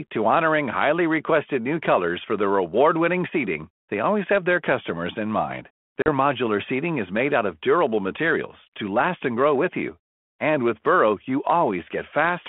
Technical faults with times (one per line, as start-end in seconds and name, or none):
6.02-6.09 packet loss on an ADPCM call